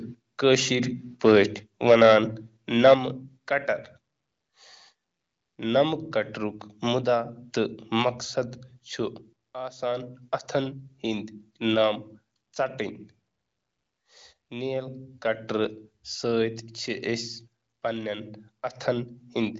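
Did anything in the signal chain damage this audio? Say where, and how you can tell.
Yes. From 2.84 to 2.94 s the loudest peaks sound harsh and crackly. This is likely microphone overload at the converter, driving it about 5 dB past full scale and flattening around 7 percent of samples.

At 2.94 s everything drops abruptly by about 7 dB. That points to call processing likely applying a microphone volume step down right after the distorted peak.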